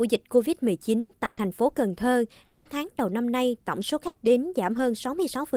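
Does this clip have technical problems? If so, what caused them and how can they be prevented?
Yes. Three kinds of packet-loss fault can be heard.

Repeated packet loss (robotic sound) runs from 0.33 to 2.73 s. Within that stretch there are three separate holes, the longest 200 ms, which together cover about 17% of the span. Each is bridged by stretching the last received sound forward, so 420 ms of concealment stands in for 420 ms of audio that never arrived, giving a choppy, robotic texture. The holes keep recurring across more than two seconds, which is what sets this apart from a single burst. It can be prevented by giving the connection more stable bandwidth and a larger jitter buffer.

A lost packet rebuilt from error correction occurs twice, at 3.81 to 3.83 s and at 4.77 to 4.79 s, each 20 ms long. In both cases the packet that followed carried a low-bitrate copy of the lost one, and the decoder played that copy instead. 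Nothing is missing and there is no gap, only a brief rougher, noisier patch. That distinguishes it from true loss, where audio actually disappears. Keeping in-band FEC enabled and reducing loss on the network path prevents it.

A burst of packet loss happens at 4.07 to 4.17 s. Here 80 ms of audio went missing, and the receiver filled the hole by continuing the last sound while fading it down, producing either a held buzz or a dying hiss. The audio then resumes further on with that 80 ms gone. Unlike the robotic stretch, this is one isolated gap. A jitter buffer deep enough to absorb late packets would prevent it.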